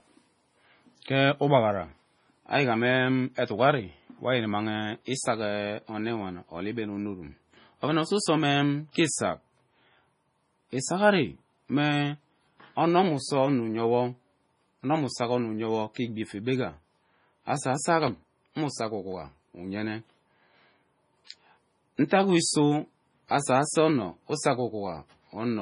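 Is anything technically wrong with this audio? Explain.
Yes. Throughout the clip, the speech has likely been through heavy MP3 compression at a bitrate that sounds as low as about 24 kbps. Starved of bits, the encoder has cut everything above 10.5 kHz and dropped weak frequency lines frame by frame, leaving the speech dull, watery and swirly, with metallic chirps on s sounds.

There is also pre-echo, from 8.91 to 8.95 s and from 15.94 to 15.96 s, spreading over 39 ms and 24 ms. Sharp attacks landed late in a transform block, so quantisation noise sized for the loud onset leaked into the silence before it, producing a brief hiss and softened, smeared attacks.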